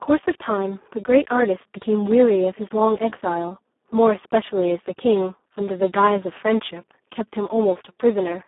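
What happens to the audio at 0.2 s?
At 0.2 s the speech carries Speex codec damage, present across the whole clip. Too few bits for the excitation leave it hoarse and noisy, consistent with a setting near 4 kbps, within a 250 Hz to 3.5 kHz band and nothing above 3.7 kHz.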